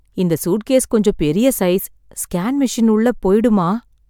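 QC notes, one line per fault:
No fault to note in QC; the speech clip needs no fault lines.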